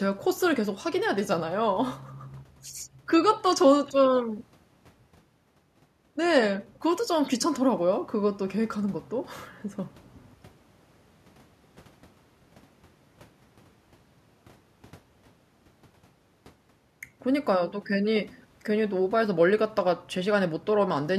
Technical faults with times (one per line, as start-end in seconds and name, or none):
none